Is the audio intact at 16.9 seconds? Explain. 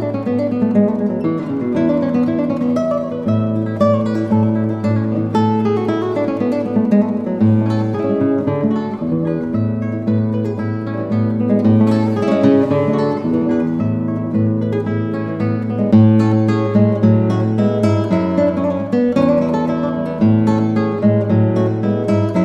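Yes, at 16.9 seconds the audio plays through intact, with no dropout, click, distortion or other fault.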